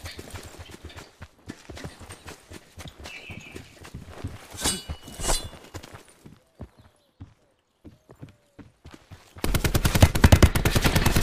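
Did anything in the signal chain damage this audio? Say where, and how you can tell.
No, no damage is audible.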